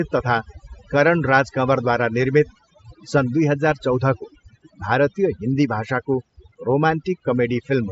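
Overdone noise removal runs through the whole recording: a noise reducer set too aggressively cuts individual frequency bands whenever they sit near its noise estimate, taking quieter speech detail along. The background drops and breaks up into twinkling specks, on top of a headset-style band limit near 7.7 kHz.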